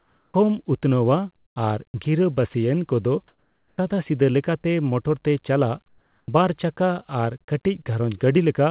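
A speech recording carried over a narrowband call path, with nothing above 4 kHz, which fits G.711 mu-law. There are three faults. Comfort noise replaces the background from 0.00 to 0.34 s, 3.28 to 3.78 s and 5.88 to 6.28 s. The real room tone gives way to a steady, featureless hiss about 11, 8 and 6 dB quieter, likely from discontinuous transmission. Unlike a naturally quiet pause, the texture itself changes, not just the level. The onset is clipped by the voice detector at 0.31 to 0.34 s and 3.74 to 3.78 s, cutting 30 and 40 ms. Speech starts abruptly without its soft attack, likely because the detector was slow to notice it. From 1.36 to 2.54 s the sound is chopped by the voice detector, with about 240 ms in all swapped for comfort noise. Unlike a single clipped onset, this switching, likely in the detector, recurs within one stretch, so syllable edges drop.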